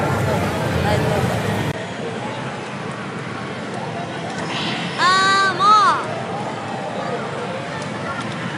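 At 1.72 s the sound drops out for a brief 20 ms gap and comes back duller and a little quieter, roughly 5 dB down, with a faint new background noise sitting well beneath it. From there to the end, nothing is heard above 10.5 kHz, so the top end stays muted and boxy. This points to an input switched to a poorer device, most likely the system moving to a different, narrower-band microphone.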